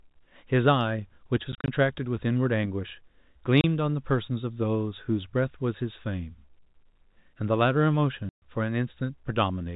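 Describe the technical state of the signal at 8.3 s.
At 8.3 s the speech drops into a packet loss filled with silence, from 8.29 to 8.42 s. About 130 ms of audio is missing, which fits a run of 10 ms packets. The receiver played silence in their place. The gap has hard edges where the speech cuts off abruptly.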